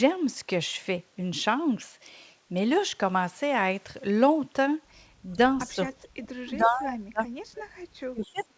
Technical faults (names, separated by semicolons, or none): speech suppressed in double talk; echo leak